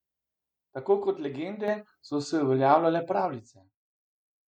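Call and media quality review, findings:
Microphone volume stepped up at 1.68 s: speech and background noise jump together by about 6 dB in one instant. Probable component: the call client's automatic input-gain control raising the device's microphone volume after judging the input too quiet. Distinct from a fader-style change because nothing ramps. The step is abrupt and the noise floor rises with the speech, so the change happened at capture, not in later processing.

Zipper noise from 3.18 to 3.79 s: fast ticking rides on the speech while the level drops by roughly 25 dB. Probable component: a gain stage applying the new level in 2 dB increments, about twenty per second, with no interpolation between them, so each jump leaves a small click. This fade is audibly stepped, and unlike the single microphone jump it is a rapid train of small steps.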